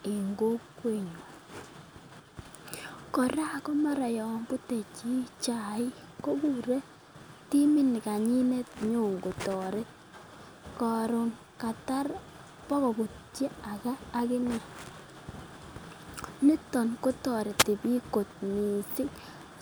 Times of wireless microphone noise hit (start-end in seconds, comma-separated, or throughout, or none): 17.58-17.64